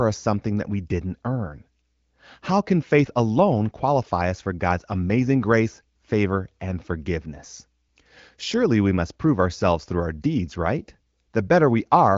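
No technical faults can be heard anywhere in this speech recording. It has come through an AMR wideband (HD Voice) codec at a rate that fits 15.85 kbit/s, which leaves only light coding damage and nothing above about 7.5 kHz.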